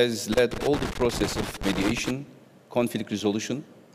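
From 0.32 s to 2.11 s there is loose connector crackle. A worn or dirty contact keeps making and breaking as it moves. The signal is chopped. It sounds like irregular scratching over the sound.

At 0.94 s a block of digital silence lasts about 17 ms. At 2.27 s another lasts about 2 ms. Samples were replaced by zeros, likely because the output buffer was not filled in time. Each cut starts and ends abruptly. The first is a short hole; the second is a tick.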